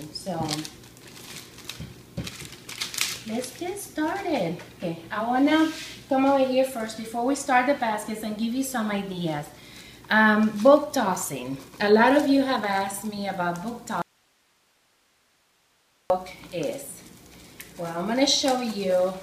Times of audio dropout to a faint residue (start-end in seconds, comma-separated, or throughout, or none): 14.02-16.10